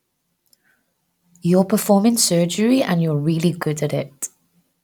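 Nothing stood out as a technical problem on listening to this speech recording.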